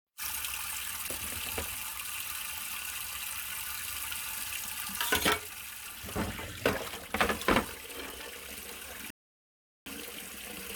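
Everyday sounds here, with one rebuffering stall from 9.10 to 9.86 s: playback ran dry, sat silent about 0.76 s, then picked up exactly where it paused, nothing lost.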